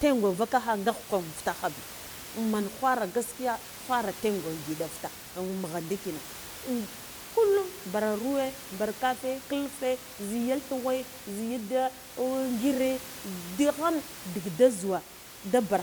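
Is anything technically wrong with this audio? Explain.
No, nothing technical is at fault here; the background room noise, sitting about 15 dB below the speech, belongs to the recording space rather than the signal chain.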